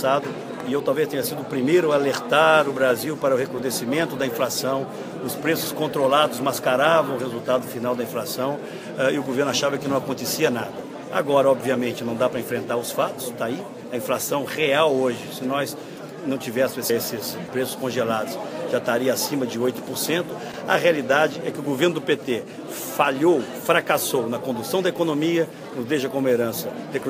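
No technical fault can be heard anywhere in this audio. There is nothing to place on the timeline and nothing to explain.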